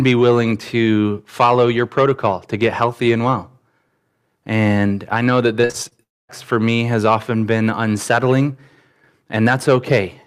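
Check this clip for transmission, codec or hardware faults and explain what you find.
Two transmission faults sit close together in the second half of the speech, both from audio lost on its way across a network.

Repeated packet loss (robotic sound), 5.61 to 5.93 s, just after "I know that": packets went missing five times in about a third of a second, the longest hole 44 ms and about 120 ms lost in all. Each hole was patched by extending the last bit of sound, so 37% of the stretch is stand-in audio. The speech turns choppy, with small pieces cut out of it.

Long network dropout, 6.03 to 6.31 s, ending right before "for me has often": the sound briefly carries on as an extension of what came before, then falls to silence for about 240 ms before the speech returns. The likely cause is a stall in which about 260 ms of audio never arrived, so the receiver stretched out the last sound, ran out of anything to continue and then went quiet. 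The lost portion is never heard.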